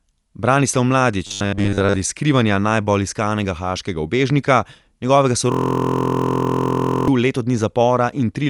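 Across the whole clip the speech sounds dull and band-limited, with nothing above 11.5 kHz and plainly audible coding damage: rough, fluttering noise clinging to tonal parts where spectral lines have been left without detail and filled with noise. The likely cause is Dolby Digital compression at a low bitrate, consistent with something near 64 kbps, where the encoder narrows the band and starves many frequency lines of bits.

From 1.27 to 1.96 s the speech turns into a rigid, metallic buzz at 100 Hz that still roughly tracks the speech contour. This is robotic sound from repeated short buffers, the likely result of audio arriving too seldom so that a 10 ms stretch is replayed to cover the gap while most of the real signal in that span is skipped. The fixed repeat period imposes the 100 Hz pitch.

From 5.52 to 7.08 s a single 23.22 ms fragment loops exactly, over and over, producing a steady buzzing stutter at 43.1 Hz. 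This is a system hang loop. The host or driver stalled while the sound hardware kept cycling through the same ring buffer, and the loop length fits a 1024-sample buffer. Because the loop is short, it reads as a buzz rather than a slow machine-gun stutter.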